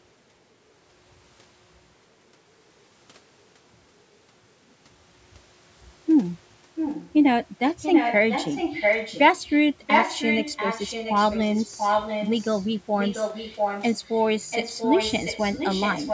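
From 6.75 to 7.13 s, then 7.82 to 9.53, 9.83 to 12.68, 13.0 to 14.25, and 14.5 s to the end, an echo leak is heard. A copy of the speech returns about 0.69 s late, only slightly quieter. An incomplete echo canceller on a far-end loudspeaker is the likely cause.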